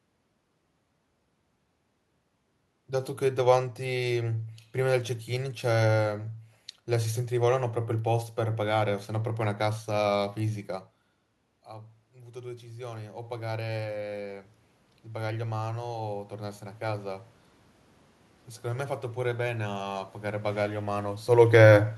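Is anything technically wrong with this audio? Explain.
Yes. There are two automatic gain faults.

From 11.66 to 17.33 s, the automatic gain rises. The talker moves back before this and the input drops by about 19 dB. The gain control then lifts its gain slowly by about 12 dB. Voice and room noise swell up together over several seconds.

From 21.29 to 21.72 s, the automatic gain falls. The talker moves just before. The control cuts its gain by about 4 dB. The voice sinks along with its background.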